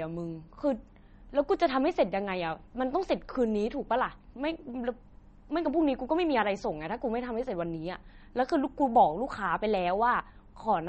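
MP3 compression affects the whole clip. Nothing in the speech reaches above 8.4 kHz, and the damage is plainly audible. This is likely an encoder short of bits, as a rate near 33 kbps would be, cutting the treble and dropping weak frequency lines.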